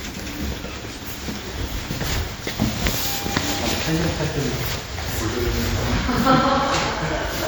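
Throughout the clip the sound carries a ringing, washy smear and a hiss that swells and fades with the signal, likely WMA compression at a rate that fits about 48 kbps. Quantisation noise spreads around each event, and a spectrogram shows patchy, blocky gaps where weak detail was zeroed, with nothing above 20.1 kHz.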